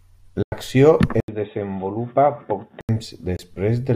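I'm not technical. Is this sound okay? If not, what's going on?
No. At 0.43 to 0.52 s the audio cuts out for about 93 ms, and at 3.37 to 3.39 s for about 23 ms, then carries on as if it had kept playing. Each gap is likely a Bluetooth dropout: bits of audio arrived too late for the wireless link and were thrown away.

From 1.20 to 2.89 s, after a short 80 ms silence, the sound turns dull and boxy, with nothing above about 3.8 kHz. It is also a little quieter, with a very faint new background noise. This points to the input having likely switched to a poorer device, such as a headset's call microphone.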